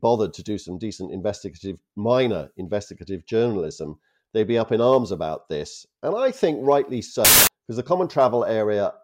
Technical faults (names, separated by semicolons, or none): wrong sample width